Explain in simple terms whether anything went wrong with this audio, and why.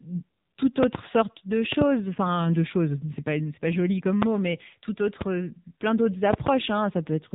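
The whole clip went through the AMR narrowband mobile codec. Nothing above 3.8 kHz survives, and heavy squeezing leaves the speech thin, buzzy and synthetic.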